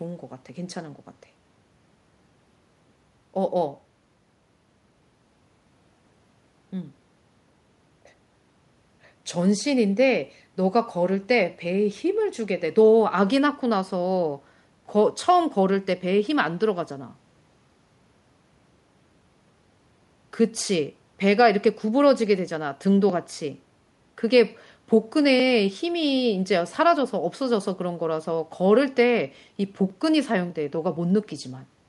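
Speech, with no technical faults.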